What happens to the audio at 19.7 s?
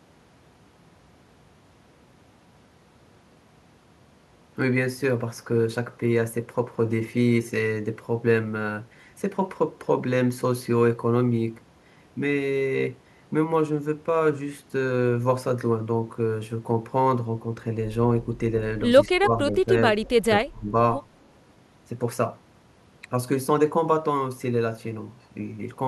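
Speech suppressed in double talk, 19.65 to 19.72 s: the speech dips by about 5 dB, likely an echo canceller ducking speech that overlaps the far end.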